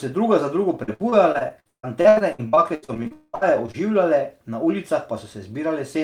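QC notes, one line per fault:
0.83–3.87 s, repeated packet loss (robotic sound): right after "druga za drugo", some two dozen short holes, the longest 159 ms, are patched by repeating the preceding sound. About a third of this span is filled-in audio, which makes it choppy and robotic. On the spectrogram, harmonics appear smeared and repeated in slices. The waveform shows chopped, repetitive segments.
3.12–3.35 s, long network dropout: the stream likely stopped arriving for about 0.22 s. The last sound is stretched into a fading buzz for about 0.21 s, followed by about 30 ms of silence, and the audio returns with that stretch lost. The waveform shows a decaying envelope into a flat line, and the spectrogram shows a blurred smear and then a blank gap.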